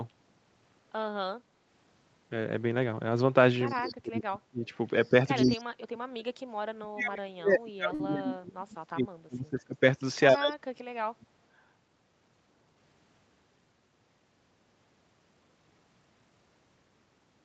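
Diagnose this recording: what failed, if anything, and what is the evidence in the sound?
Echo leak, in call processing: faint delayed copies of the far side come back at 3.66–3.94 s, 5.04–5.09 s and 5.46–5.64 s, each trailing by 118 ms and sitting roughly 20 to 40 dB below the speech. This is likely loudspeaker pickup that the far end's echo canceller failed to fully cancel.

Speech suppressed in double talk, also in call processing: the talker ducks or drops out at 3.7–4.71 s, 5.4–6.26 s, 6.72–9.75 s and 10.32–11.29 s, typically by around 35 to 40 dB, with a brief shallow dip at 5.1–5.14 s. The likely cause is the echo canceller turning down its own talker along with the loudspeaker echo when both sides speak at once.

Short stall from a late packet, at the network and jitter-buffer stage: at 7.94–8.01 s the sound is held for 52 ms, then resumes with nothing skipped. The buffer ran empty and the receiver stretched the last audio until the packet arrived, leaving playback 52 ms later thereafter.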